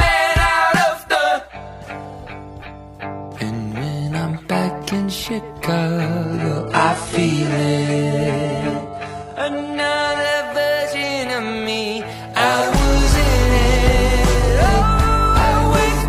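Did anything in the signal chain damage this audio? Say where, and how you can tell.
Yes. Network stage: an adaptive stream at a lower bitrate, 6.24 to 10.24 s. Treble above 11.5 kHz vanishes suddenly, with no gap, which fits a 12 kbit/s HE-AAC switch.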